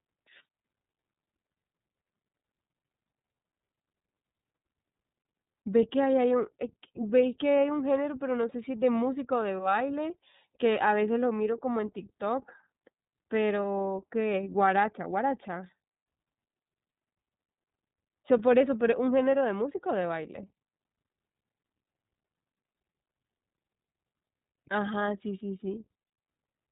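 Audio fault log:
Throughout, iLBC codec: the speech sounds muffled and thin, with nothing above about 3.8 kHz, and carries a plainly audible rough, synthetic edge. The codec works in a narrow band and rebuilds each short frame's excitation from scratch rather than predicting it from the frame before. That loses fine detail, which fits iLBC's 30 ms frame mode at around 13.33 kbps.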